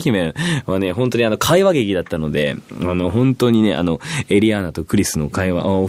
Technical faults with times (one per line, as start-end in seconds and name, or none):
none